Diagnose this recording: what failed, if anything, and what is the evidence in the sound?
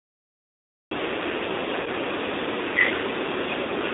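Cut-off start at the recording stage. Digital silence runs to 0.91 s, then speech begins abruptly mid-sound, with no natural attack. Capture began late.

G.729 codec throughout. Speech sounds rough and synthetic, confined to roughly 250 Hz to 3.7 kHz. The 8 kbit/s model rebuilds speech from filter and pulses.

VoIP packet loss concealed by the speech codec, a network fault. From 1.81 to 1.89 s, about 50 ms of speech is stretched into a buzzy tone or coloured noise that fades. The decoder extrapolated its last pitch.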